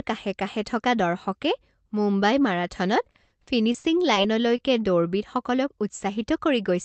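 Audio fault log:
3.01 to 4.18 s, repeated packet loss (robotic sound): The speech breaks up into a choppy, mechanical stretch. Eight separate holes open in just over a second, the longest about 50 ms. Each hole is patched by extending the sound that came before it. The patches total about 230 ms, roughly a fifth of the span. About 140 ms of real audio is simply gone. The repeated synthetic fill gives the robotic edge.
4.56 to 4.60 s, short concealed packet loss: A single brief blip interrupts the speech. About 20 ms of audio failed to arrive in time. The receiver filled the hole by carrying the last sound forward, then blended back into the real signal. The patch is only about 20 ms long, so it comes across as a quick smear or wobble rather than an audible gap. A short consonant at that point could be lost.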